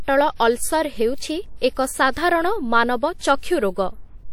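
A transform codec has spread quantisation noise across whole blocks, so noise sized for a loud attack also lands in the quiet moment just before it. That is pre-echo, and it happens twice in this speech. From 0.35 to 0.40 s a hiss of about 46 ms runs ahead of an attack, and from 3.18 to 3.21 s a 30 ms hiss does the same. Each onset arrives softened and smeared rather than crisp.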